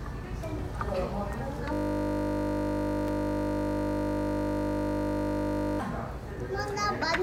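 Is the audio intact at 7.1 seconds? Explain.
Yes, the audio is intact at 7.1 seconds, with no audible fault at that moment.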